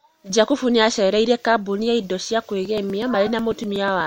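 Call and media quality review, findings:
Periodic USB or driver dropouts, 2.65–4.01 s: regular ticks every 0.123 s, a couple of ms skipped each time, about ten. Something's blocking the USB bus or audio driver on a timer.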